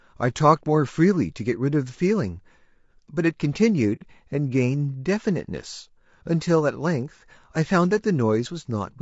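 From start to finish the speech sounds rough and grainy, with a noisy fill between the pitch harmonics and a thin, somewhat synthetic top band. This plainly audible damage is likely from low-delay AAC compression at about 32 kbps. Its short frames resolve harmonics poorly, which sets it apart from the warbly, watery smearing of a long-frame codec.

Between 3.95 and 4.03 s the sound fades into a short silent hole and fades back. This is AAC frame loss with muting, and the gap fits about two lost frames whose spectrum the decoder zeroed. The overlapping windows soften both edges, unlike a hard dropout.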